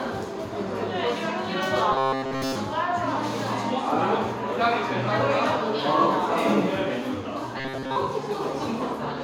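From 1.92 to 2.55 s, the sound turns into a rigid, metallic buzz at 133 Hz. This is robotic sound from repeated short buffers. A slice of about 7.5 ms was likely looped while fresh audio was skipped. It returns, partly repeated, from 7.58 to 7.97 s.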